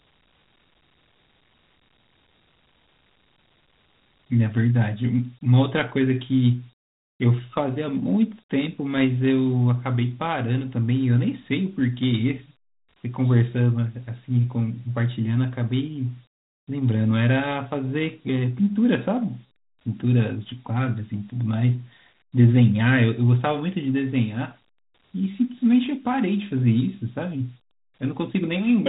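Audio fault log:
Throughout: Dialogic VOX ADPCM. The speech is carried by Dialogic (OKI) ADPCM, which stores each sample as a 4-bit step relative to a running prediction. Those coarse steps cannot follow the waveform closely, so a gritty hiss rides along with the voice and the coding damage is plainly audible. Nothing is heard above about 3.9 kHz, which fits a sampling rate of 8,000 per second and a data rate near 32 kbps.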